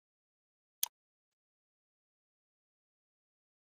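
From 0.87 s the sound smears into a fading buzz, then near-silence until 1.33 s, with about 0.44 s lost: likely a long network dropout.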